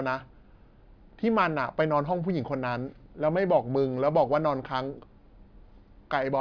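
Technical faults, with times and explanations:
No technical faults detected.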